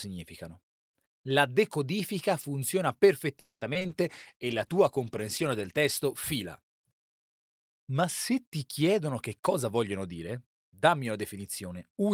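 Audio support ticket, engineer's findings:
Call audio freeze, 3.39–3.63 s, right after "decodifica funziona": buzzy held tail fading into about 120 ms of silence, 220 ms inserted, nothing lost. Likely jitter buffer underrun from late packets. Waveform: decaying smear, then a flat gap before audio resumes.

Short concealed packet loss, three hits at 3.73, 3.79 and 3.87 s: brief smears or wobbles, 20 ms of real audio replaced each time. Decoder concealment extrapolating the last frame. Spectrogram: short smeared stripes with soft seams where real audio blends back in.

Call bitrate drop, 4.06–6.85 s: sound turns rough, watery and dull as the encoder falls from 32 to 14 kbps, bottoming out for 1.73 s. Bandwidth estimate fell and Opus coded coarsely. Spectrogram: high band cut off, blotchy texture until recovery.

Jitter buffer speed-up, 8.93–11.12 s, following "se ti": delivery hurried to 109% speed at unchanged pitch, roughly a fifth of a second trimmed overall. 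Receiver cutting pitch-period chunks to drain excess buffer. Waveform: compressed timing, no pitch shift in the spectrogram.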